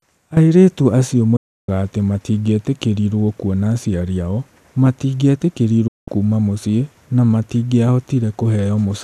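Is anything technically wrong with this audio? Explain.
Yes. The speech has two digital broadcast dropouts, at 1.36 to 1.69 s and 5.87 to 6.08 s. The receiver lost valid frames and muted. Each gap fades out within 8 ms to silence. The missing sound never returns; the programme simply resumes.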